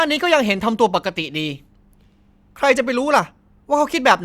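No technical faults are audible.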